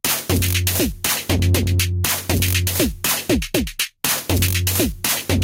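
Gain pumping runs through the whole recording. After each loud sound, the gain swings back up, then drops again when the next loud sound arrives, with a swing of around 10 dB. The likely cause is input gain set far too high, with a fast limiter or compressor pulling it down on every peak. Loud and quiet moments end up squashed close together. Unlike a noise gate, the background never cuts to silence, and unlike clipping, the loud sounds aren't flattened into harsh distortion.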